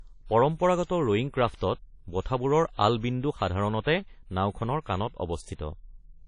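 Throughout, the speech sounds washy and ringing, with hiss breathing alongside it and nothing above 10.1 kHz, likely WMA compression at a low bitrate around 32 kbps.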